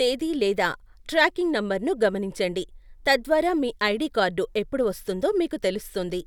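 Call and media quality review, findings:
No faults heard in this speech recording; nothing to attribute to capture, transport or playback.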